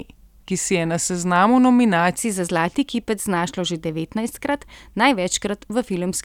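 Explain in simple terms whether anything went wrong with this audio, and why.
From the start to 2.18 s, the speech is a section at the wrong speed. It plays at 0.893 times normal, likely because it was fitted to the wrong clock. Unlike a plain pitch change, it drags slower as well as sounding about two semitones deeper.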